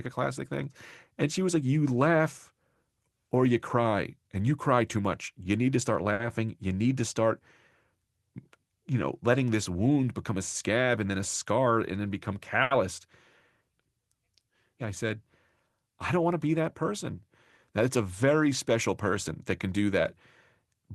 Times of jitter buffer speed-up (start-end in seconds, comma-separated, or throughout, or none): 11.44-11.72, 20.66-20.94